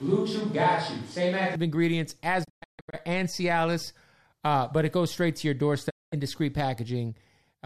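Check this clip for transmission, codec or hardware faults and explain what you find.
Two kinds of fault are present: a distant-microphone passage at the start and two digital broadcast dropouts.

From the start to 1.56 s, the sound is a switch to a distant microphone. The close microphone was likely missing, so a mic further from the talker carried the signal. The voice sounds roomy and hollow, with thin bass. The level barely changes. Room noise is audible but stays well below the speech, around 30 dB down. At 1.56 s the close, full sound returns abruptly.

The digital broadcast dropouts come at 2.43 to 2.95 s and at 5.89 to 6.14 s. The receiver lost good frames and muted until valid data came back. Each gap fades out and in over about 20 ms. The first event is a cluster of short holes across roughly half a second, with the longest about 144 ms. The second follows "goes straight to your" and is one gap of about 216 ms. 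Whatever was sent during these gaps is lost.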